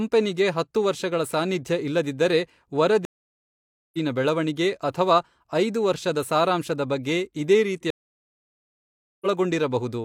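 Speech drops out twice in stream reconnects: silence at 3.05–3.98 s (0.88 s) and 7.90–9.26 s (1.31 s). Each time the decoder restarts and the speech resumes roughly 0.7 s further on. The waveform shows flat gaps, and the spectrogram shows blank columns with abrupt content jumps.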